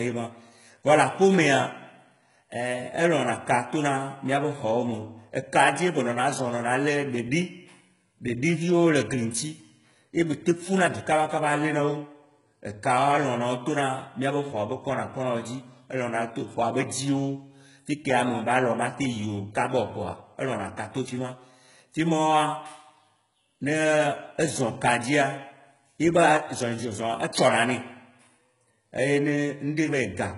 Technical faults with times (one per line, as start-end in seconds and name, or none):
0.00-30.37 HE-AAC compression
0.15-30.36 clock slip clicks